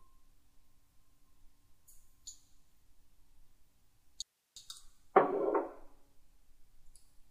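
Audio dropout to a faint residue from 4.22 to 4.56 s: the sound cuts out abruptly for about 340 ms, leaving only hiss far below the signal, likely a brief signal loss with the downstream path still live.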